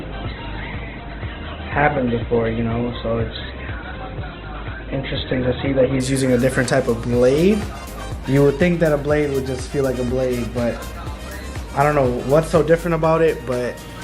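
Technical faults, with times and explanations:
0.0–6.0 s, adaptive stream starting at a low bitrate. Nothing sounds above 4.2 kHz and codec artefacts are strong. The player opened on a lean version to start fast. At 6.0 s quality jumps with no gap, which fits a move from 12 to 64 kbit/s Opus.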